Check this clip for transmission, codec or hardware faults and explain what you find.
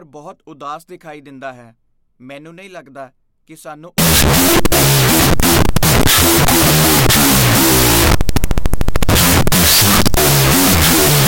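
One fault runs from 3.98 s to the end, immediately after "ਨਹੀਂ ਲੱਗਦਾ ਕਿ ਸਾਨੂੰ", and it is a wrong sample width. The speech turns into loud, harsh noise with the talker buried underneath, slowed to half speed and dropped in pitch. This fits 16-bit audio being read as unsigned 8-bit. Each original sample splits into two values, which doubles the sample count and halves the playback speed. Only the high bytes still trace the waveform, while the low bytes add the noise.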